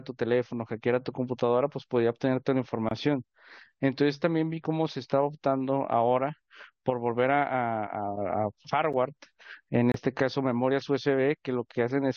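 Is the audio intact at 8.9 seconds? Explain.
No, at 8.93 s there's a gap between stream segments: mismatched timestamps leave an 8.5 ms hole filled with silence, a hard-edged dropout in the speech.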